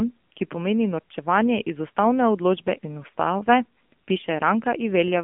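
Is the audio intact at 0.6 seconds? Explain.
No. At 0.6 seconds, as across the whole clip, the speech passes through an AMR narrowband mobile codec at about 7.4 kbps, rebuilt from a vocal-tract model with sparse pulses, so it sounds buzzy and synthetic. A spectrogram shows a hard ceiling near 3.5 kHz, with empty space above.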